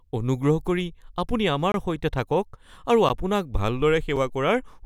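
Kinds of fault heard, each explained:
Block of digital silence: speech cuts dead three times, for 23, 12 and 5 ms, which fits unfilled output buffers.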